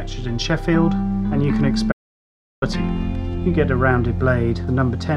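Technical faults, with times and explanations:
1.92 to 2.62 s, audio dropout to silence: the sound cuts off abruptly and returns after about 0.7 s of silence with no room tone, likely from a lost input.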